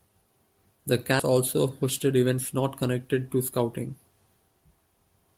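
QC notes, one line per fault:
1.19 to 1.35 s, skip ahead: the speech jumps forward almost seamlessly, losing roughly 0.4 s, as queued audio was discarded and playback resumed from later material.
1.83 to 2.38 s, jitter buffer speed-up: the speech sounds slightly hurried at unchanged pitch, about 7% fast, before "not connected to", as roughly 50 ms of pitch periods were trimmed to drain excess buffering.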